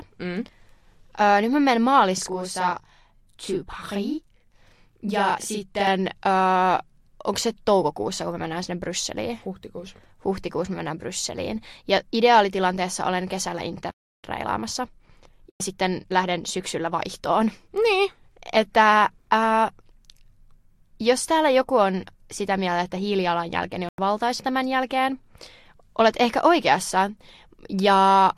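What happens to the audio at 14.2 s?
At 14.2 s a playback stall ends and a time-compressed catch-up begins. Right after "ideaalitilanteessa olen kesällä", the player was likely starved of data or had its output thread held up, so the speech cuts out in mid-flow and the output stays silent from 13.91 to 14.24 s, roughly a third of a second, before resuming where it stopped.

To clear the backlog built up during that gap, the player then trims tiny slices out of the stream and cross-fades across the joins, running at about 1.15 times normal speed from 14.24 to 16.38 s. The speech sounds hurried while the pitch stays where it should. Normal pace returns by "syksyllä vaihtoon".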